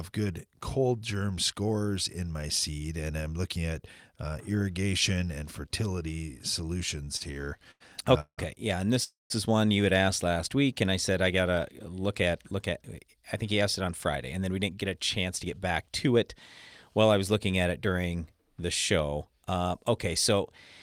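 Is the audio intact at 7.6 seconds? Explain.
No. At 7.6 s the speech is caught in repeated stalls (stutter) that run from about 7.05 to 7.82 s. Packets arrived too late for playback, so the jitter buffer ran dry nine times, and each time the receiver stretched the last sound to bridge the wait. That filler adds up to 208 ms, about a quarter of the span, with the longest hold 92 ms. Nothing is lost, but the speech drags and hiccups. A spectrogram shows short, flat, smeared stretches of held harmonics, and the waveform shows repeated copies of one cycle, fading during the longer holds.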